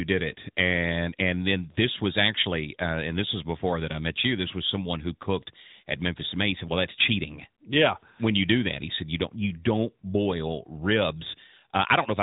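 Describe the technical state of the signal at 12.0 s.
At 12.0 s the speech carries AMR narrowband mobile codec damage, present across the whole clip. The codec models the vocal tract and rebuilds excitation from a few pulses. Nothing above 3.8 kHz survives. The synthetic coloration is plainly audible, which fits a bitrate near 10.2 kbps.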